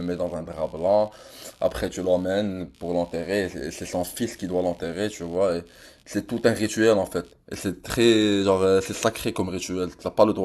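Computer activity noise runs from the start to 7.3 s beneath the speech: a buzzy, chirping pulse at around 70 Hz, roughly 35 dB below the speech. Processor or peripheral load changes shift the audio circuit's shared ground, so the noise follows computer activity, not the speech.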